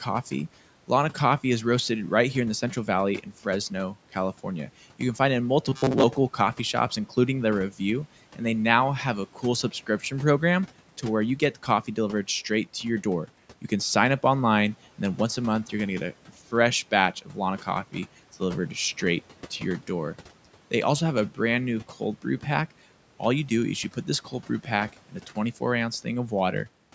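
Robotic sound from repeated short buffers appears at 5.65 to 6.04 s, between "can find it in" and "coffee shops including". The sound turns into a stiff metallic buzz at 133 Hz. The likely cause is audio arriving too slowly, so a slice of about 7.5 ms was replayed over and over in place of most of the real signal.

Speech cut by the noise suppressor occurs at 9.71 to 10.12 s, just before "program to where you"; at 17.22 to 17.36 s, after "get a fresh batch"; and at 24.93 to 25.37 s. Each time the suppressor mistook quiet speech for background and pulled it down by about 8, 10 and 11 dB. Roughly a tenth of a second each time sounds swallowed and faint.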